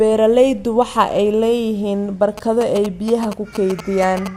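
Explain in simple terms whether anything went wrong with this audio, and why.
From about 2.38 s to 4.28 s, a galloping dit-dit-dit of short buzzes sits behind the speech. These are GSM signalling bursts: a nearby 2G phone talking to its network sends radio pulses that the audio equipment picks up and turns into sound.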